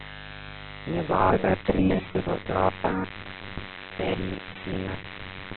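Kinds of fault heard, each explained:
Mains buzz: switching spikes twice in every 50 Hz cycle, with harmonics of 50 Hz, form a steady, raspy buzz under the speech throughout, about 15 dB below its level.
Opus compression: narrowband, heavily damaged sound with nothing above 4.2 kHz; the rough, grainy tone likely comes from Opus in CELT mode at a very low bitrate.
Robotic sound from repeated short buffers: from 1.11 s to the end, a rigid metallic buzz at 93.8 Hz, likely from repeating a roughly 10.7 ms buffer over most of the audio.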